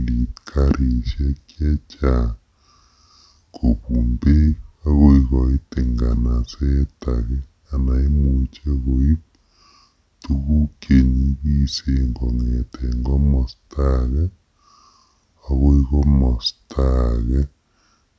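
Speech slowed to 0.726 speed and pitched 5.55 semitones low throughout by a wrong sample rate; spectrogram formants and harmonics sit compressed downward.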